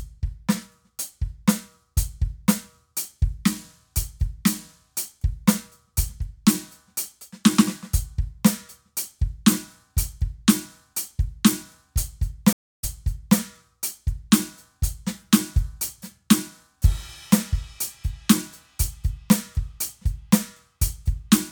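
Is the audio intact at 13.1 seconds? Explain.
No. At 13.1 seconds the music is inside a stream reconnect that runs from 12.53 to 13.38 s. The connection dropped and the player fell silent for 0.27 s, then reconnected and started a fresh decoder partway into the stream. Playback resumes 0.58 s earlier than where it broke off, so a short stretch of music repeats, and the first frame comes back fading in.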